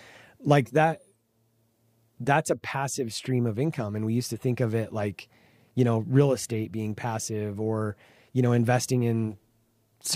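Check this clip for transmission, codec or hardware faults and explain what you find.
Nothing in the speech clip points to a fault in how it was carried, encoded or captured. There is no event in it that needs flagging.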